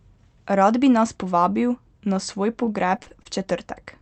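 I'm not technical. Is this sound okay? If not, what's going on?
No. From 2.65 to 3.27 s the speech turns choppy and robotic. This is repeated packet loss: pieces of the call audio went missing six times, the longest about 42 ms. Each hole was patched by stretching the previous sound, giving that robotic effect.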